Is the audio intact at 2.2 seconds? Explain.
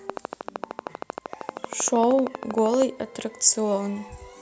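No. A train of clicks runs from 0.10 to 2.83 s, regular ticks at 12.8 per second, around 10 dB above the speech and audible in pauses too. Their closely matching shape and steady pace, unlike random crackle, point to likely electrical interference or a faulty connection.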